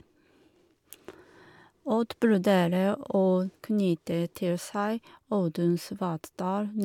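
A short bit of speech, and there's nothing technically wrong to point out anywhere in it.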